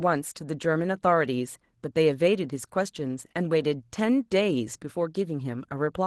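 Opus voice compression runs through the whole speech clip, and the damage is plainly audible. The coder is working at a starved bitrate, which fits roughly 16 kbps, splitting the job between a linear-prediction core for the lower band and a transform layer for the top. With so few bits, the excitation is coded coarsely, so the voice comes across hoarse and faintly robotic.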